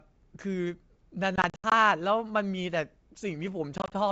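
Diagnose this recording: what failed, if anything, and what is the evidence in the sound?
The network failed: packet loss on an ADPCM call, over a wideband G.722 link that stays clear. From 1.36 to 1.73 s, about 180 ms of speech drops out in hard-edged silent gaps spread across 360 ms. The longest gap is 80 ms, and roughly ten packets are lost. From 3.78 to 3.95 s, 80 ms vanishes across 140 ms in gaps up to 20 ms. After each gap the decoder's predictor and step size no longer match the sender's. The returning speech is slightly distorted and settles briefly.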